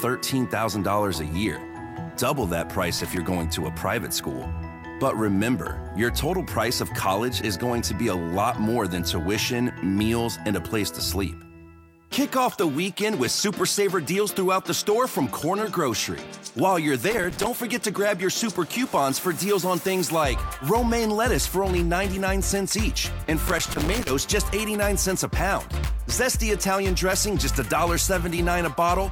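A worn or dirty contact making and breaking intermittently chops the signal: loose connector crackle, heard as irregular scratchy bursts at 2.98–3.17 s, 17.11–17.47 s and 23.48–24.10 s.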